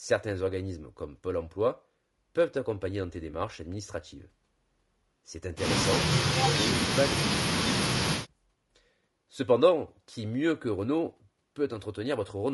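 From start to end, the speech sounds rough and grainy. The harmonics are poorly resolved. This is likely low-delay AAC compression, AAC-ELD, whose short frames cost bits. The damage is plainly audible and fits a bitrate near 32 kbps.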